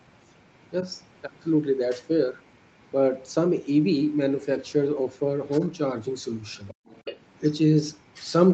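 An echo canceller that likely let the far end's loudspeaker signal back into the microphone causes the other side's voice leaking through: a very faint second voice at 0.61–0.7 s and 2.41–2.85 s, much more prominent at 6.68–7.2 s, then moderately audible at 7.37–7.53 s.

During that loudest stretch the canceller also clamps down on the microphone, gating the background from 6.75 to 6.86 s. For about a tenth of a second the room sound drops by up to about 40 dB, leaving a brief hole before it returns.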